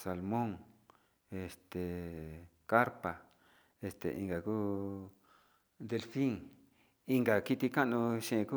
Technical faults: none

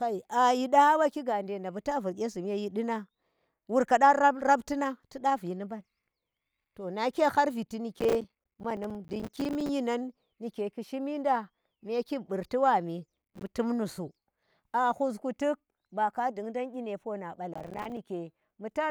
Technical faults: processor overload crackle

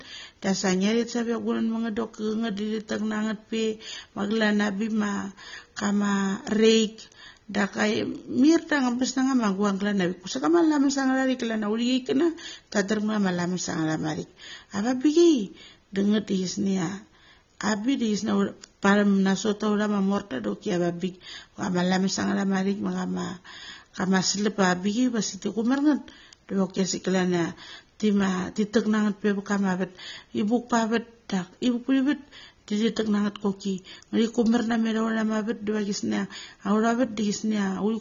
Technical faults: AAC compression

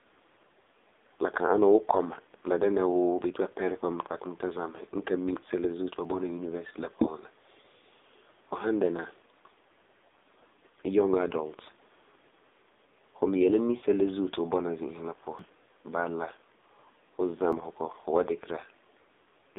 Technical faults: AMR narrowband mobile codec; dropped buffer (overrun)

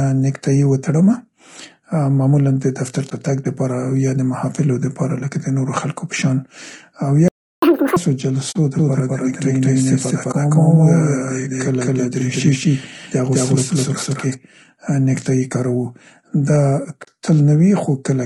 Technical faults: low-delay AAC compression; AAC frame loss with muting; playback stall; catch-up at higher speed; doubled audio track

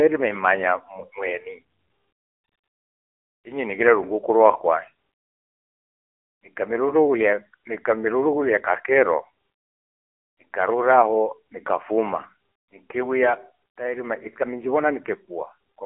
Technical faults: AMR narrowband mobile codec

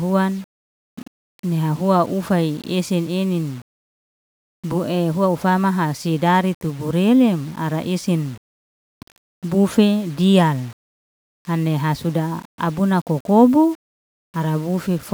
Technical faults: low bit depth without dither

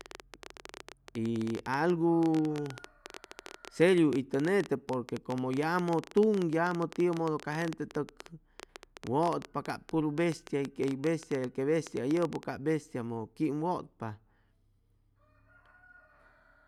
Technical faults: train of clicks

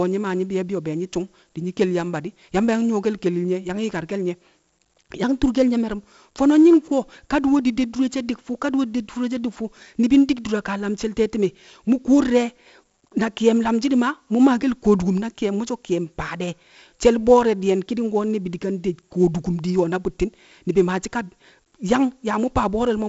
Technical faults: 4-bit ADPCM compression

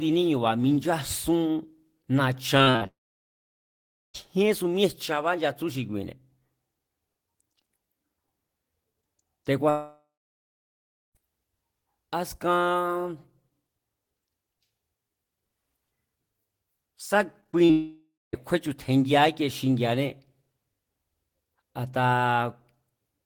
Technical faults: repeated packet loss (robotic sound); long network dropout

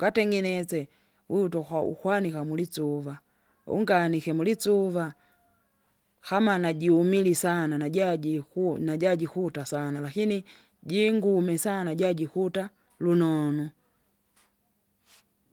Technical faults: none

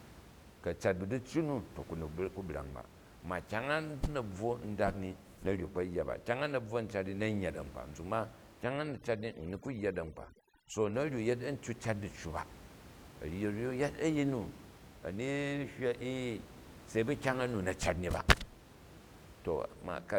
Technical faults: overdone noise removal

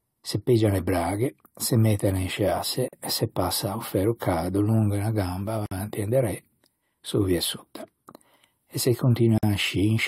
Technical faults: gap at a join of encoded pieces

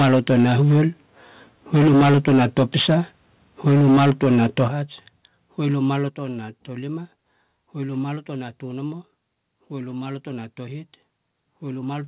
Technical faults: microphone overload; microphone volume stepped down

